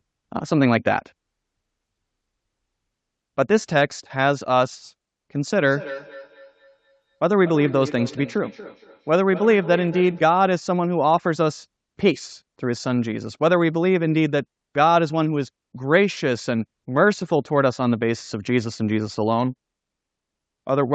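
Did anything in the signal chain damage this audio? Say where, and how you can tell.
Yes. From 5.53 to 10.3 s there is feedback echo between two devices: each phrase returns roughly every 200 ms, peaking about 14 dB below the speech. A second device in the room is replaying the call into this microphone, and the local echo canceller cannot remove another device's output.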